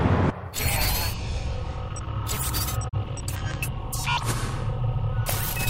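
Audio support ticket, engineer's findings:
Digital broadcast dropout, 2.88–2.95 s. Fast 20 ms fade into a brief mute, then recovery. Receiver muting on a bad frame; the 32 ms gap suggests a single lost frame.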